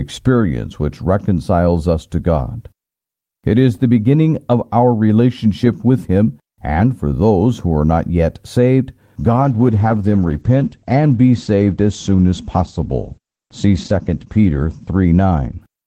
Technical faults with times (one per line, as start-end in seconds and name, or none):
9.21-15.83 call bitrate drop